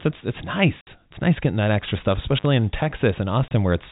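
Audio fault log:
0.81 to 0.87 s and 3.48 to 3.51 s, packet loss filled with silence: right after "it's it's" there's a 60 ms hole, and near the end a 30 ms one. The gaps are dead silent with hard edges because whole packets went missing and the receiver just played nothing in their place. The 60 ms gap is exactly twice the 30 ms one, which fits lost 30 ms packets.
2.36 to 2.46 s, intermittent contact: just after "getting that extra stuff" the line drops out for about 45 ms inside a crackly stretch of roughly 90 ms. That's a loose plug or cable briefly opening and closing, so the contact scratches at each edge. It sits on the same band-limited telephone sound as the silent packet gaps.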